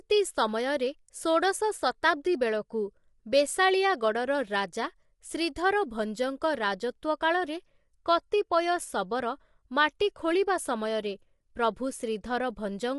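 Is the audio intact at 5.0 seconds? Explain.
No. Across the whole clip, including 5.0 seconds, the speech shows low-delay AAC compression, likely AAC-ELD at a rate near 32 kbps. Its short frames resolve pitch harmonics poorly, so the voice sounds rough and grainy, with noise between harmonics and nothing above 11.6 kHz.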